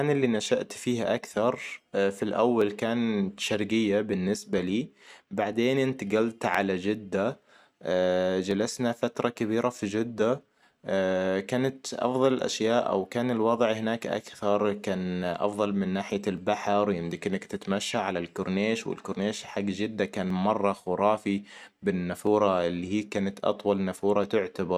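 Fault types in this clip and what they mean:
Clock drift buffer slips: a click or pop lands in the speech at a steady 1.97 s spacing, about fifteen of them from 0.65 s to 24.24 s. The likely cause is two devices running on separate clocks, so the buffer between them creeps full or empty until a chunk gets dropped or repeated. The regular spacing fits a clock mismatch of around 300 ppm, with roughly 30 samples slipping each time.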